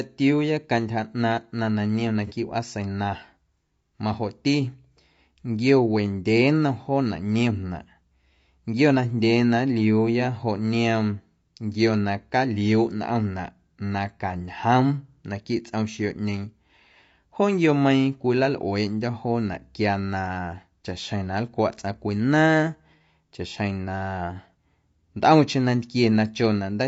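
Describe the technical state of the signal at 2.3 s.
AAC frame loss with concealment runs from 2.27 to 2.32 s. About 30 ms of coded audio went missing, which fits a single lost frame, and the decoder patched the gap from the preceding spectrum, so the speech there turns briefly smeared and noisy.

Low-delay AAC compression, likely AAC-ELD at 32 kbps, colours the speech around that moment. Its short frames resolve the pitch harmonics poorly at this bitrate, leaving a plainly rough, grainy texture with noise filling the gaps between harmonics and an artificial-sounding top band.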